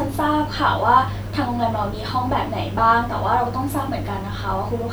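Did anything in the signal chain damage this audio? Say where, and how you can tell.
No, nothing along the way seems to have harmed this speech recording, so there's no stage to point a finger at.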